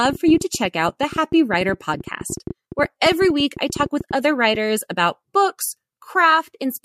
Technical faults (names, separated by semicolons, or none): train of clicks